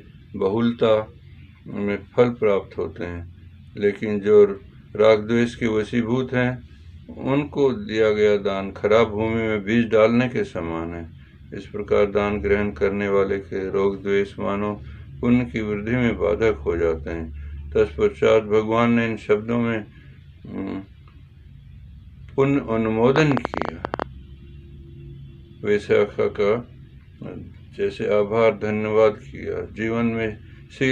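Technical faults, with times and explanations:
23.16–24.03 s, train of clicks: About fifteen similar clicks tick over the sound, roughly 16 per second, at an uneven pace. They stand well above the signal, around 15 dB louder. Interference from nearby equipment or a faulty connection or power supply is the likely source.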